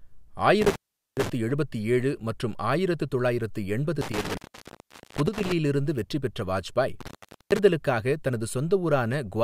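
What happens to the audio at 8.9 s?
Nothing goes wrong at 8.9 s; the speech carries on intact there with no dropout, glitch or distortion.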